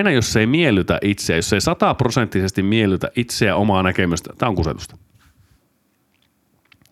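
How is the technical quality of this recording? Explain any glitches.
No technical glitches can be heard anywhere in the recording. There is nothing in the audio that calls for an explanation.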